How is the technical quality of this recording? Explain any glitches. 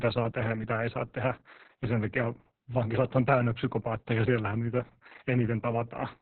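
The recording is heavily degraded by Opus voice compression throughout the speech. The codec is in its SILK linear-prediction mode at narrowband, so everything above roughly 4 kHz is gone, and the excitation is coded very coarsely, which fits a bitrate of about 6 kbps. The result is muffled, telephone-like speech with a hoarse, buzzy texture and a slightly robotic quality. Consonants lose their crispness, and the damage is severe enough to be obvious from start to finish.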